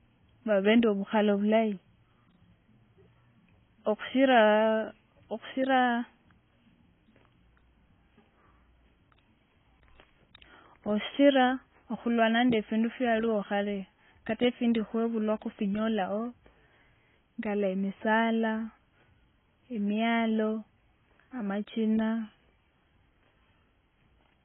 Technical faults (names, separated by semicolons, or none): AAC compression